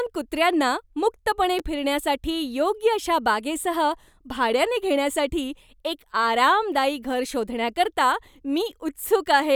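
A repeated buffer at 1.59 s, just after "कुत्र्यांना मुक्तपणे", interrupts this speech clip: when fresh audio arrived late, the device replayed its last 5.8 ms chunk two extra times, which fits a 256-sample buffer. The hard joins between repeats make a brief click-like buzz rather than a stutter.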